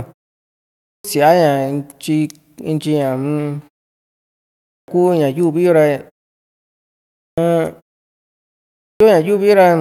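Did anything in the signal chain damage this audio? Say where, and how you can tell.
Yes. At 0.49, 4.38, 6.87 and 8.45 s, speech starts abruptly with about 0.5 s missing. This is a clipped start after a pause: the playback device sleeps through silence and wakes too slowly.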